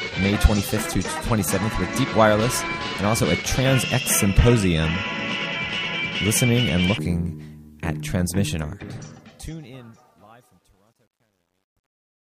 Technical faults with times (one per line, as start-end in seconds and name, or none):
8.49-12.36 truncation distortion on a fade